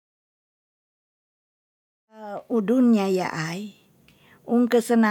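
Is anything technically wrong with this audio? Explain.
No, nothing technically wrong can be heard here.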